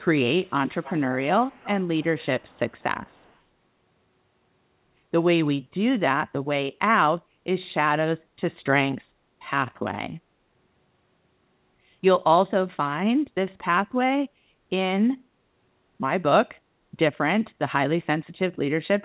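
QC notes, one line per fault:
0.43–1.16 s, 1.43–1.82 s, 1.99–2.83 s and 3.05–3.37 s: echo leak. A quiet copy of the speech trails about 192 ms behind and fades away by the last bit. It's likely a far-end speakerphone's echo canceller letting it slip through.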